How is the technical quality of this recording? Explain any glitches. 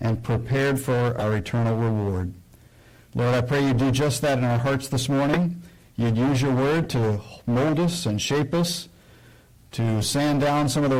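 Pretty rough, honestly. Hard clipping runs through the whole clip: it's driven about 15 dB past full scale, so nearly a third of the samples get sliced flat, giving harsh fuzz on everything loud. Then there's a corrupt frame decoded at 1.18–1.22 s, 5.32–5.38 s and 6.83–6.86 s. Damaged compressed frames get played anyway, spraying energy at wrong frequencies for two or three frames each, so you hear short chirps, blips or bursts of noise, loudest around 5.3 s.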